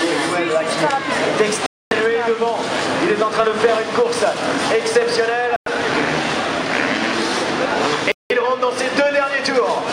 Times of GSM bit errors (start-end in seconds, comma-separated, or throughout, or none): none